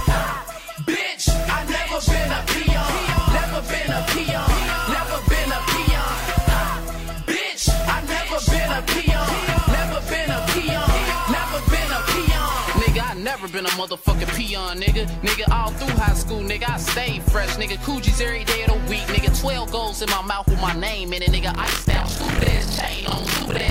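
Buffer tearing starts at 21.53 s and runs to the end at 23.70 s. A robotic buzz at 43.1 Hz rides on the sound, which fits a 1024-sample buffer. Writer and reader have slipped, so about two fifths of each buffer replays audio from roughly 50 ms earlier, with hard joins.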